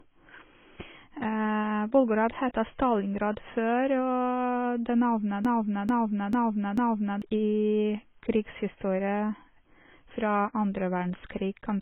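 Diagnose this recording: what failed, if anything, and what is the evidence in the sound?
Throughout the clip the speech sounds dull and smeared, with nothing above 3.8 kHz and a warbling, fizzy texture on sibilants. This is heavy AAC compression damage at the codec stage, likely AAC-LC at a bitrate around 16 kbps, which lowers the cut-off and quantises the spectrum coarsely.

Right after "det navnet", from 5.45 to 7.22 s, a 0.44 s fragment repeats four times back to back like a broken record, and the audio that belonged there is missing. This broken-record loop likely comes from a stalled player or stream resending its last buffered fragment.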